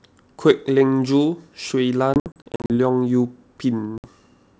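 Packet loss on the ADPCM call chops speech from 2.14 to 2.70 s, with 280 ms lost in gaps up to 60 ms, then a 60 ms hole at 3.98 s, each followed by slightly distorted speech as the mistracked predictor settles.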